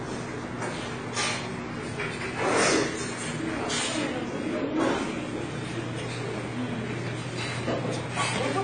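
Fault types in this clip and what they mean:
AAC compression: The audio stops dead at 9.6 kHz, with nothing above it for the whole clip. It sounds dull and smeared, and the damage is plainly audible. Sustained parts carry a warbling, fizzy texture. The likely cause is AAC-LC coding at a low bitrate, and the sound fits a rate near 24 kbps. At that rate the encoder lowers its cut-off and gives each frame too few bits, so fine detail is coarsely quantised and blurred.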